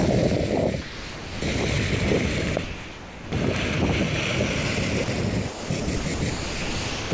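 The audio passes through a call path with nothing above 8 kHz, which fits a G.722 link. Sound dropped by the voice detector replaces the audio with comfort noise at 0.82 to 1.42, 2.64 to 3.32, 5.04 to 5.08, 5.48 to 5.70, 5.80 to 5.88, 5.96 to 6.06, 6.14 to 6.22 and 6.30 to 7.12 s. The sender's detector likely judged these parts to be background and stopped sending them.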